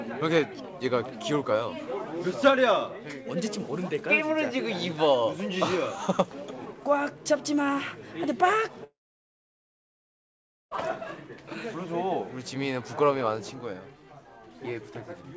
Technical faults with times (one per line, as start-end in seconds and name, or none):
8.84-10.73 long network dropout